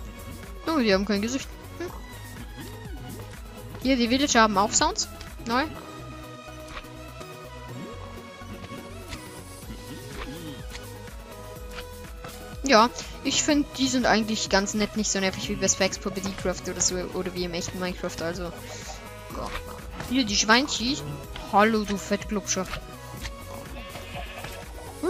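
No technical faults can be heard anywhere in this recording.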